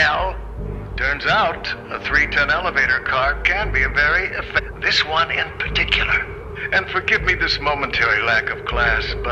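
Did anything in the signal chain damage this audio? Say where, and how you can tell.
Yes, network side: at 4.58 to 4.60 s the sound jumps forward with a small blip, likely a stream segment skipped when one failed to load.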